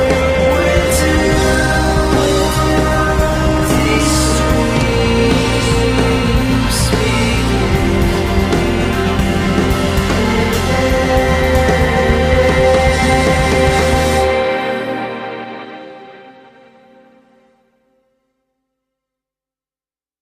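An adaptive stream starting at a low bitrate affects the audio from 0.0 to 4.0 s: treble is thin or synthetic and codec artefacts are stronger, which fits Opus at around 16 kbit/s, then quality jumps without a gap to something nearer 64 kbit/s once the player has gauged the connection.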